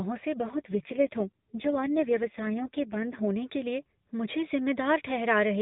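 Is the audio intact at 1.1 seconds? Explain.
No. An AMR rate drop runs from 0.38 to 3.28 s; the codec falls to a lower rate, likely near 4.75 kbps, making the speech rougher and more synthetic.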